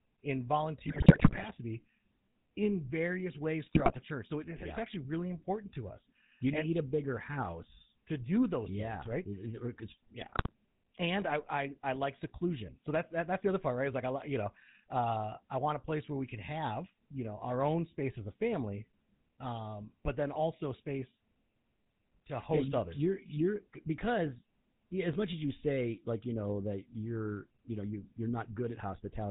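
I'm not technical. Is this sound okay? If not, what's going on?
No. The whole recording has a buzzy, gravelly roughness and sounds muffled: that's the GSM full-rate codec, an early mobile-phone format that cuts off everything above 4 kHz. The speech also breaks into squawks and gargling at 0.86–1.48 s, 3.64–3.98 s (right after "in various") and 10.20–10.53 s (just before "and I I I"). These are GSM bit errors: on a weak connection, corrupted data reached the decoder and briefly scrambled the sound.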